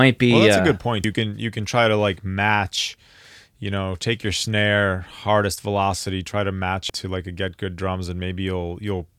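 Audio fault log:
1.04–1.07 s and 6.90–6.93 s, damaged data in a compressed stream: corrupted bytes in the compressed stream made the decoder misread frames, lose sync and search for the next valid frame header. Each time, this leaves a brief blip of about 30 ms in the speech: the first right after "uh a good point" and before "can you can try", the second after "velocity try to match" and before "to like a get".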